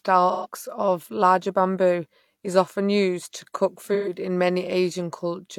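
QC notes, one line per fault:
0.31–0.47 s and 3.93–4.13 s, AAC frame loss with concealment: about 128 ms of sound is lost just before "of larger bamboo is" and just after "often used to cook". The decoder rebuilds it from the last good spectrum, giving a smeared, noisy, phasey patch rather than a dropout.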